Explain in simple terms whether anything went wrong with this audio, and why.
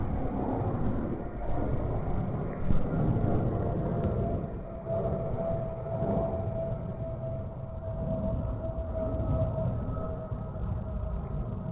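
At 4.04 to 4.06 s the sound suddenly jumps forward, with no silence at the join. About a second of audio is simply missing, and the parts on either side are stitched straight together. This is a skip ahead. The audio travelled as a live call, and a chunk was lost along the way or thrown out by the jitter buffer, the small waiting area that smooths out late-arriving audio, because newer audio was already queued behind it.

Just after that, from 4.40 to 5.89 s, the sound plays noticeably quicker, about 16% faster than normal, yet its pitch stays the same, so it comes across as rushed rather than squeaky. This is a jitter buffer speed-up. The buffer was holding more audio than it wanted, so to catch up it snipped out many tiny slices, adding up to roughly a third of a second, and played the rest without them.

Throughout, the audio sounds like a phone call, since the call system keeps nothing above 4 kHz.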